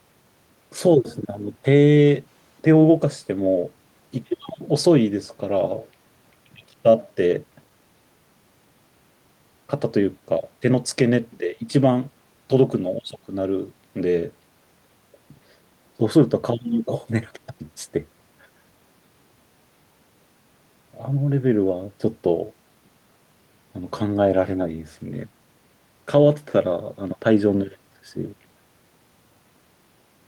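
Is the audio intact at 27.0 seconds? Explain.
Yes, the speech at 27.0 seconds comes through intact, with no dropout, click, distortion or other fault audible at that point.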